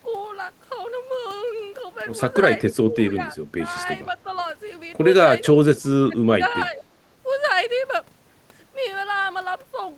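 Speech dips at 2.85–2.96, 3.13–3.39, 3.59–3.64, 5.73–6.28 and 6.67–6.89 s, by about 5–10 dB at first, then by about 25 dB at 5.73 s and 15 dB at 6.67 s. This is speech suppressed in double talk, likely an echo canceller turning down overlapping talk.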